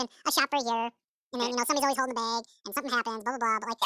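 Wrong sample rate affects the whole recording, from start to finish. The samples are played back at twice the rate they were captured at, with no conversion, so everything runs at double speed and the pitch rises by a full octave, 12 semitones. Voices sound chipmunk-like, high and hurried, with syllables rushing together. A clean two-to-one ratio of speed and pitch points to audio recorded at 16 kHz being played as if it were 32 kHz.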